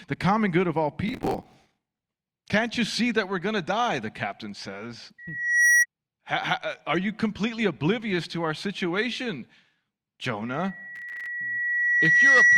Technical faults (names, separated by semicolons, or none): processor overload crackle; loudspeaker feedback squeal